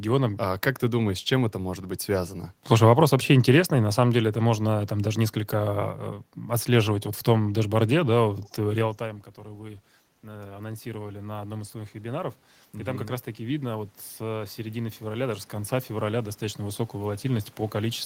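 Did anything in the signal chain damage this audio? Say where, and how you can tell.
Yes. Call processing applied automatic gain rising from 8.98 s to the end. After the talker moved away near 8.5 s, the level fell by about 17 dB. The gain control then climbed about 14 dB. Voice and room noise swell together, which shows gain rather than the talker.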